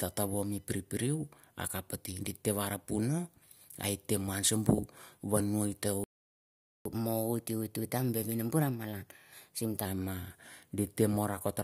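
A playback stall cuts this speech recording to silence from 6.04 s to 6.85 s, a gap of about 0.81 s. The likely cause is the player running short of buffered data or its audio thread being blocked. Catch-up at higher speed follows from 6.85 s to 9.85 s: the player resamples its backlog at 1.1 times normal speed, so the speech runs faster and sits about a semitone and a half higher for three seconds, then drops back to normal rate and pitch.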